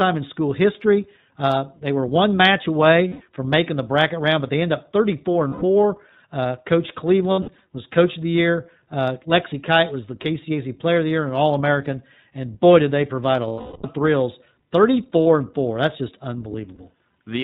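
Speech recorded through the iLBC codec: the narrowband coding points to iLBC running at about 15.2 kbps in 20 ms frames. It cuts everything above 4 kHz, so the voice sounds muffled, slightly rough and synthetic, with plainly audible codec damage throughout. Lost iLBC frames also occur, where packets went missing and the decoder filled the holes by repeating the last pitch cycle blended with noise. Each gap comes across as a held, buzzy or breathy vowel, with clean speech returning almost immediately because each frame decodes on its own. The losses fall at 3.08 to 3.22 s (120 ms, between "they were one match" and "from making the bracket"), 5.48 to 5.64 s (140 ms), 7.32 to 7.60 s (160 ms scattered in short bursts, the longest under a tenth of a second), 13.48 to 13.86 s (360 ms, after "did they provide a", long enough to audibly fade) and 15.22 to 15.26 s (40 ms).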